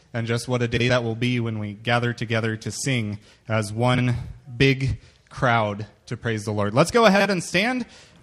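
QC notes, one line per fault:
0.76–0.90 s, 3.94–4.07 s, 7.15–7.26 s: frames out of order. In each span, two adjacent runs of frames were decoded in swapped order, so the audio plays with its halves exchanged. This is heard as a brief garbled flutter. The first two swapped blocks are about 93 ms, which fits four-frame runs. The last is about 46 ms, suggesting two-frame runs. No time is lost overall.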